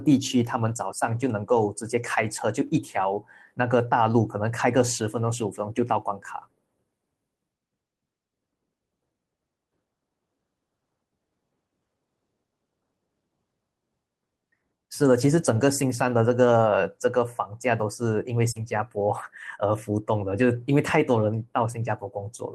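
At 1.55 s, 2.67 s and 4.59 s there is a lost packet rebuilt from error correction. Each loss is about 20 ms, which fits a single dropped frame. The following packet carried a low-bitrate spare copy of the missing audio, and the decoder played that copy instead. The sound never breaks. Each spot turns briefly rougher and grainier, then returns cleanly. There is no smear or trailing-off, and that is what separates these from concealment.

From 18.51 to 18.57 s there is a short concealed packet loss. About 40 ms never arrived in time. The receiver filled the hole by extending the last sound it had, following its pitch or spreading it as shaped noise, then faded back into the real audio. This one is heard as a smear or wobble rather than graininess, because the filler is a guess built from what came before. A spare copy rebuilt the final 20 ms, from 18.55 s, so the patch ends with a rough, grainy stretch.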